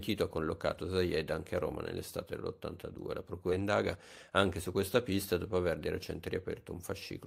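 At 3.51 s the speech hits a skip ahead: about 0.7 s of audio was discarded while later audio was already waiting, so playback jumps forward with no gap. On a waveform or spectrogram, two unrelated stretches abut at a sharp seam, with formant tracks breaking abruptly.

From 3.61 to 4.81 s a jitter buffer speed-up follows as the receiver drains excess delay, cutting pitch-period-sized pieces repeatedly so speech runs about 11% fast at unchanged pitch, losing around 0.15 s. A spectrogram shows horizontally compressed syllables with harmonic spacing unchanged.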